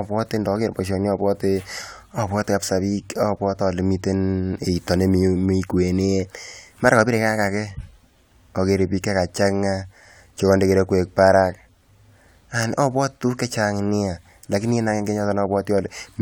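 A speech recording with no technical fault to point to at any moment. Nothing in it calls for a time or a cause.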